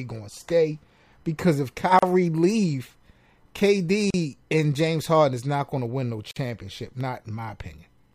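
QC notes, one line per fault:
1.99 to 6.36 s: gap at a join of encoded pieces, three times, at 1.99 to 2.03 s (36 ms), 4.10 to 4.14 s (36 ms) and 6.31 to 6.36 s (50 ms). The speech drops to sudden silence with smeared edges, then resumes where it stopped. Separately encoded pieces were joined untrimmed, so each encoder's start delay and end padding remain.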